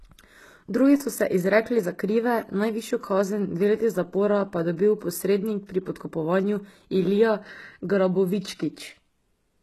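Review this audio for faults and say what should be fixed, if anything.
The speech sounds metallic and gritty in the treble from start to finish, with nothing above 12.4 kHz. The likely cause is HE-AAC compression at a very low bitrate, around 16 kbps. Copied treble replaces the real top end, so harmonics misalign. Encode the source at a higher bitrate, or with a full-band codec.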